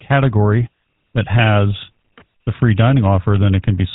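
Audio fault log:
throughout, GSM full-rate codec: the speech has been squeezed through the early GSM vocal-tract model, and the damage is plainly audible. The codec rebuilds each stretch from a filter shape driven by a sparse, evenly spaced pulse train, so voiced sounds take on a buzzy, gravelly roughness instead of a smooth tone. Nothing survives above 4 kHz, which dulls sibilants and removes air. The coarseness fits a 13 kbps full-rate stream.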